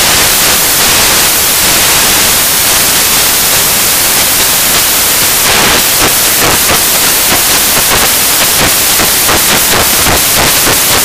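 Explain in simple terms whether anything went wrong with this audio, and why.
Something went wrong throughout the whole clip: samples built from the wrong bytes. The player assembled each audio value from its bytes incorrectly, so the rapidly changing fine detail became the main signal. From start to finish you hear loud, harsh hiss-like noise instead of the real sound.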